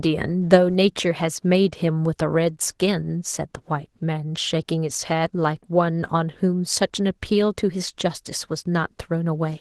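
Opus voice compression runs throughout this speech clip, which fits about 16 kbps in hybrid mode: linear prediction codes the lower band and a transform layer the top, with the excitation quantised so coarsely that a plainly audible hoarse, slightly robotic graininess results.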